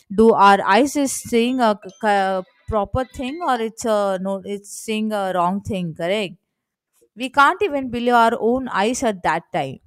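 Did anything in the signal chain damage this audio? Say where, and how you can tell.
Yes, there's hard clipping in two spots: from 0.21 to 0.75 s, and briefly from 7.39 to 7.44 s. The speech peaks run past what a stage could pass, about 3 dB over in the first stretch and about 4 dB in the second, so the tops get sliced flat. That squaring-off throws harmonics high up the spectrum, heard as a gritty crackle riding on the loudest syllables. It points to an overloaded converter or a fixed-point format conversion.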